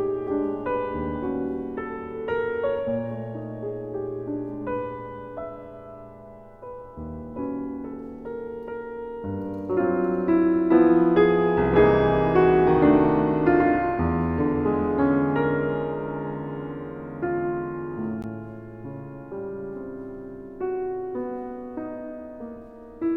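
At 18.22 s a block of digital silence about 15 ms long drops the signal to silence without a fade. It sounds like a tick, and it shows as a flat gap in the waveform.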